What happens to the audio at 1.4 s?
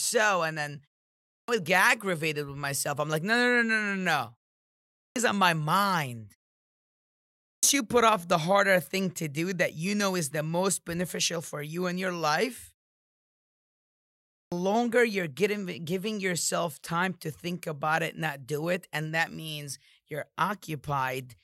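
A clipped start after a pause runs from 1.19 to 1.48 s. After a 0.4 s silence, the output device has dozed off and needs about 290 ms to wake, so the speech resumes abruptly, its opening sounds swallowed before the audio comes back.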